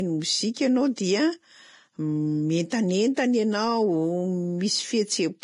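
Speech that sounds hissy and grainy for its whole length, with a dulled top end, rough tonal edges and smeared consonant onsets, points to heavy Vorbis compression as the likely cause: treble quantised into noise, consistent with a bitrate around 29 kbps.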